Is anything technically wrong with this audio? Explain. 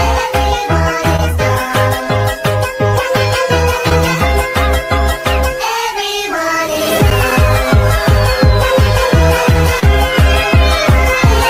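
Yes. Brief smears, at 1.16–1.19 s, 3.89–3.92 s and 9.80–9.83 s, are short concealed packet loss: about 10–30 ms of audio arrived too late, and the receiver extended the preceding sound before blending back.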